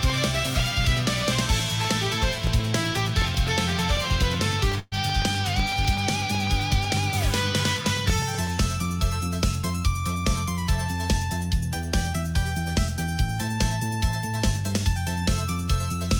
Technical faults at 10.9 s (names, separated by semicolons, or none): none